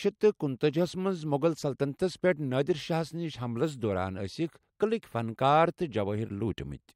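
A speech recording, and nothing is technically wrong with it.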